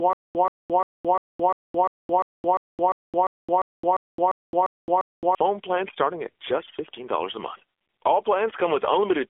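AMR narrowband mobile codec, from 0 s to the end: the speech has been squeezed through the 2G/3G mobile speech coder, which rebuilds the voice from a vocal-tract model excited by a handful of pulses per short subframe. Nothing above 3.6 kHz survives, and the band sits roughly between 300 Hz and 3.5 kHz, giving a thin telephone tone. The damage is plainly audible: a buzzy, synthetic edge that points to a low mode around 7.4 kbps.

Stutter with silent gaps, from 0 s to 5.35 s: the fault is already under way when the clip begins. A burst about 0.13 s long plays, then about 0.22 s of dead digital silence follows, and the same fragment returns every 0.35 s, 15 times in all. The likely cause is a stalled player or stream re-serving its last fragment at each retry, so the audio from that stretch is lost. Normal playback resumes with "phone plans starting at".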